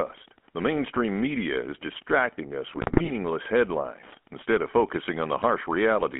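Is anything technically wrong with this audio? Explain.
Yes. Two faults are audible in this speech clip.

Throughout, the audio carries plainly audible GSM full-rate codec damage, consistent with 13 kbit/s GSM full rate. The codec rebuilds the voice from a vocal-tract filter driven by a coarse pulse excitation, leaving a buzzy, gravelly roughness. The band is limited to about 200 Hz to 3.4 kHz, like a phone line.

From 2.74 to 3.10 s, GSM bit errors corrupt the decoder's filter, pitch and gain values over many consecutive frames. The spectrum bends and the level jumps frame by frame, so the speech breaks into squawks, pops and gargling, which suggests an error rate of around 2%.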